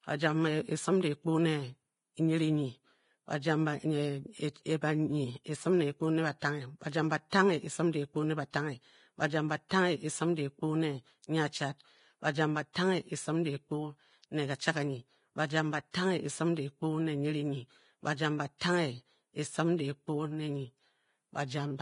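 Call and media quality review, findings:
Speech band stops dead at 10.5 kHz, treble hissy and grainy, tones roughened, consonant onsets blurred across the whole clip. Likely heavy Vorbis compression: low quality setting lowers the cut-off and quantises the upper residue so coarsely that fine detail turns into noise of similar energy over the spectral floor. Degree of damage fits a bitrate around 31 kbps.

Pre-echo: brief hiss ahead of sharp speech onsets at 7.30–7.32 s, 9.69 s, 12.73–12.75 s, 15.91–15.94 s and 18.58–18.61 s, each spread about 19 to 30 ms, attacks softened. Same transform codec: quantisation noise sized for the loud onset spreads across the whole block, filling the quiet gap just before each attack.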